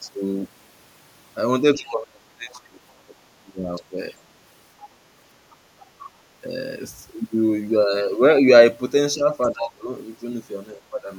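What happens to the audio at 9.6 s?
At 9.6 s the speech is caught in a stretch of speech suppressed in double talk, running from 9.15 to 9.91 s. The level dips by as much as around 25 dB, with about half a second affected in pieces. This is likely an echo canceller that heard both sides at once and turned both down. Unlike a plain dropout, the gaps track the other side talking rather than falling at random.

Inside that stretch, from 9.59 to 9.67 s, a brief scrap of the other side's voice leaks through, some 15 dB below the speech. It is likely loudspeaker echo that the canceller failed to remove.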